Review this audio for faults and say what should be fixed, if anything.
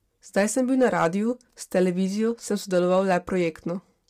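Low-delay AAC compression affects the whole speech clip. The voice sounds rough and grainy, with noise between the harmonics. This likely comes from AAC-ELD's short frames, and the sound points to a low bitrate near 32 kbps. Sending at a higher bitrate would prevent it.

Hard clipping occurs from 0.82 to 1.07 s, just after "sem bil", with about 5 dB of overdrive. It occurs again from 2.75 to 3.16 s, with about 2 dB. The peaks are cut flat, which adds harmonics high in the spectrum. Lowering the gain before the overloaded stage would prevent it.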